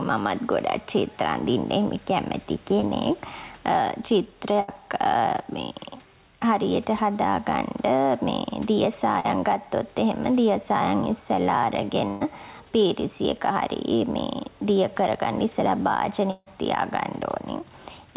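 Right through the clip there's gain pumping. The room background sits about 36 dB under the speech. The swing is around 5 dB, and the level feels flattened and squashed. The likely cause is input gain set too hot, with a fast limiter or compressor clamping down on every loud syllable. All of this sits inside a telephone-band sound with nothing above 4 kHz, which fits a G.711 mu-law path.

At 2.80 s and again at 9.20 s there's short concealed packet loss, about 20 ms and 40 ms missing respectively. The decoder papered over each hole by extending whatever sound came just before, then crossfaded back into the real audio. You hear a quick smear or wobble. The second one is long enough that a brief consonant could easily get swallowed.

The bigger hits are bursts of packet loss at 4.60 s, about 80 ms lost, and 12.08 s, about 120 ms. Several packets in a row never made it in time, so the receiver kept stretching the last sound and faded it as the gap went on. 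That comes across as a held buzz or thinning hiss. Then the speech jumps ahead, with the bit in between simply gone.

Last, at 16.31 s there's a long network dropout of roughly 160 ms. The concealment carries on the previous sound as a fading buzz or hiss for most of the gap, then drops to about 30 ms of near silence before speech snaps back further along. Nothing from that stretch returns. The likely cause is a stall where no packets arrived at all, rather than a handful going missing.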